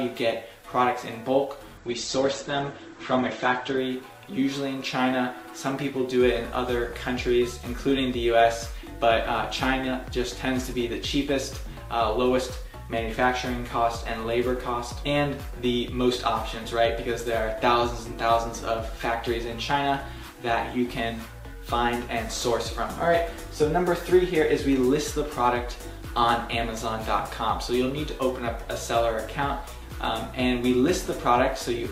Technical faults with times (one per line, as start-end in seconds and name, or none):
1.78-3.78 adaptive stream at a lower bitrate